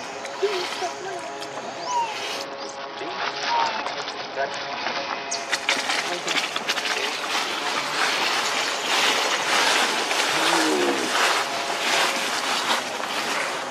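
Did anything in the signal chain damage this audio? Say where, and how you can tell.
Yes. Between 2.44 s and 5.34 s the codec stage degrades in a Bluetooth SBC bit pool drop. The top end goes dull and a gritty, grainy noise rides under the sound until it recovers. Short of bits, the encoder starves its upper sub-bands and quantises the rest coarsely, which fits a fall from a bit pool of 31 to about 7, near 61 kbps. On a spectrogram the highs vanish abruptly over that span, leaving a flat ceiling and speckled noise below it.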